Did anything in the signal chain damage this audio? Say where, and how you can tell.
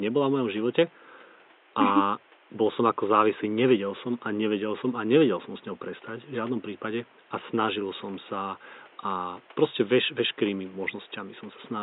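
No, nothing in the signal chain damaged this audio.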